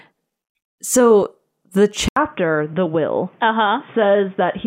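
Speech that goes dull and boxy from 2.08 s, right after an 80 ms gap, losing everything above 3.6 kHz, dropping a few dB and gaining new background noise; likely an input switched to a poorer device.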